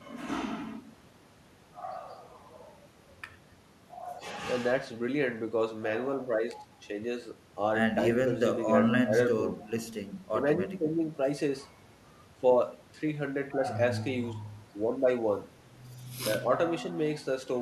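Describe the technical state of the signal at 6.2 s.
The signal at 6.2 s is intact, with no audible fault at that point in the speech.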